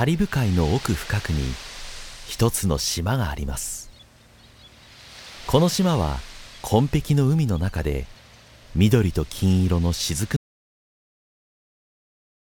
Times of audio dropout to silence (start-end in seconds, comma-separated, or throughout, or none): 10.36-12.51